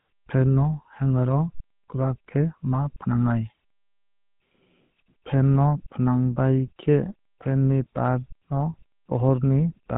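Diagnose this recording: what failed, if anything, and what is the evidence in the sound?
The speech was passed through the GSM full-rate codec: a pulse-excited vocal-tract model that fits roughly 13 kbps leaves a buzzy, gravelly roughness throughout, with nothing above 3.8 kHz.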